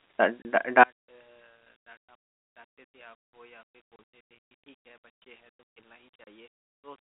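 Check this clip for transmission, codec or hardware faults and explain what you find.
Three short dropouts break the speech, each a sudden hard-edged gap. This is packet loss filled with silence.

The holes fall at 0.42 to 0.45 s, 3.96 to 3.99 s and 6.24 to 6.26 s. Each one cuts out about 30 ms, which fits a single missing packet. The receiver plays silence in its place, so each gap starts and stops abruptly.

The audio travels as G.711 mu-law telephone coding, heard in its narrow line band of roughly 250 Hz to 3.6 kHz.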